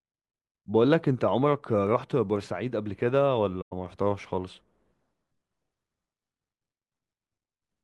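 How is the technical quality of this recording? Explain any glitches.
The speech has one glitch, AAC frame loss with muting, from 3.61 to 3.73 s. For about 107 ms the sound drops to silence, a gap that fits roughly five lost frames. The decoder filled the missing frames with a zeroed spectrum, and the overlapping transform windows ramp the audio down into the gap and back up afterward. The hole is soft-edged. That smooth fade distinguishes it from a hard sample dropout, which cuts abruptly and snaps.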